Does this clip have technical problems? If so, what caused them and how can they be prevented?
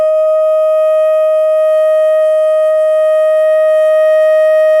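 No, no technical faults here.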